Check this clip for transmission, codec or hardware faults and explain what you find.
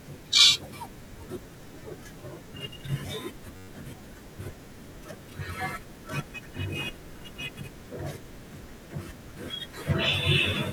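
One fault stands out. From 3.56 to 3.68 s the speech gives way to a steady buzz near 94 Hz. That is a system hang loop: the sound hardware replayed one 10.67 ms buffer eleven times, which fits a 512-sample buffer, and about a tenth of a second of audio was lost.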